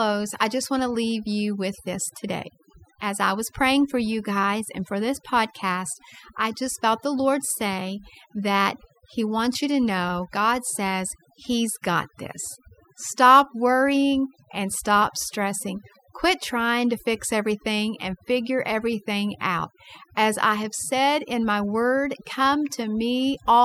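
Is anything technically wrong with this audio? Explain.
Yes. Overdone noise removal runs throughout this speech clip. A noise reduction process set far too aggressively is pulling down any frequency band it judges close to the background noise floor. Quiet parts of the speech fall below that threshold and are cut along with the noise. Between phrases the background drops, broken by twinkling specks where isolated bands flicker on and off.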